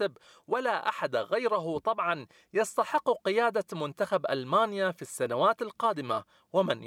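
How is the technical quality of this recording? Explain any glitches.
There is one glitch in the speech. At 2.98 s a brief electrical switching spike lands on the recording, a single snap of only a few milliseconds sitting at a fairly low level, somewhere around -35 dBFS. The likely cause is a nearby switch, motor or static discharge arcing and coupling a burst of energy into the audio line. Because it is added on top rather than replacing the speech, it comes across as a short, dry click.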